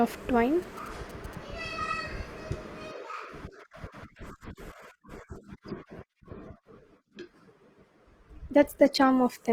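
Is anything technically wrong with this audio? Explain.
Yes. From 0.63 to 1.35 s there are GSM signalling bursts: a nearby 2G phone exchanging short control transmissions with its network, which the audio circuitry rectifies into the signal. They come through as a galloping pattern of short buzzes with a 217 Hz repetition, sitting roughly 20 dB below the speech. Because the phone is only signalling rather than carrying a call, the interference arrives in clusters instead of as a continuous drone.

From 5.73 s to the end of the clip, the speech switches to an adaptive stream at a lower bitrate. The change is abrupt and leaves no gap. It points to the player dropping from a 64 kbit/s rendition to a 16 kbit/s one after the connection slowed. In that final stretch the codec artefacts rise against the cleaner first part.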